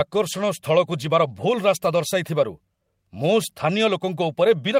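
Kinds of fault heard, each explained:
Lost packet rebuilt from error correction: at 1.03 s a dropped 20 ms packet is filled from the next packet's low-bitrate copy, so no gap, just a rough, noisy blip.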